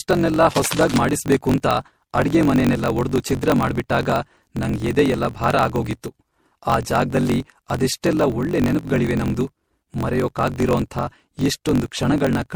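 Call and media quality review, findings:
Generation loss, whole clip. Swirly, hollow, smeared speech with blurred consonant onsets, worse than a single 64 kbit/s MP3 pass would give. Likely cause: repeated MP3 decode/re-encode, around seven passes, each quantising on a shifted frame grid so the noise and holes stack up. Spectrogram: patchy holes and smeared transients.

Block size mismatch (truncated), whole clip. Steady 46.9 Hz buzz, with speech running 1.12x fast at near-normal pitch. The reading stage takes blocks that fit 1024 samples, while the writer's blocks are 1.12x longer, so each block's tail is dropped. Waveform: a discontinuity at every block boundary. Spectrogram: a 46.9 Hz comb of harmonics, and a clean cut at each boundary.

Cable scratch noise, 0.50–0.97 s, ending just before "ಮಾಡಿಸ್ಬೇಕೂಂತ ಅಡ್ಗೆಮನೆನೆಲ್ಲ ಒಡ್ದು ಛಿದ್ರ". Rustling, scratchy bursts about 10 dB below the speech. 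Likely cause: a worn cable, connector or control being moved, with rapidly changing contact resistance. Waveform: dense, irregular spiky bursts. Spectrogram: broadband vertical streaks across that span.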